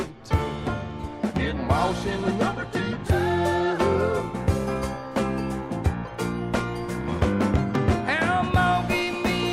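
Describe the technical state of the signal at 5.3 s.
A nearby 2G phone is bursting its transmitter about 217 times a second during a data transfer, and the audio circuitry rectifies those radio pulses: GSM phone buzz, from 4.66 to 5.41 s. It sounds like a hard, raspy 217 Hz buzz, rich in harmonics, about 26 dB below the signal.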